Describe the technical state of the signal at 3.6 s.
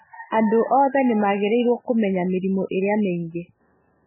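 At 3.6 s the speech carries heavy damage from likely MP3 compression, present throughout: nothing above 3 kHz, watery, swirling artefacts, and smeared attacks, which fits a bitrate near 8 kbps.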